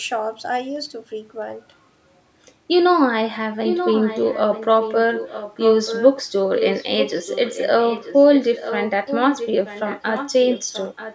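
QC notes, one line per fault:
3.63–4.65 s, 4.81–4.95 s, 5.14–6.07 s, 6.55–8.89 s, 9.06–9.48 s, 9.65–10.34 s, 10.5–11.15 s: echo leak. The speech repeats 933 ms late, about 5 dB down, then fading to about 15 dB down. Likely an incomplete loudspeaker echo canceller.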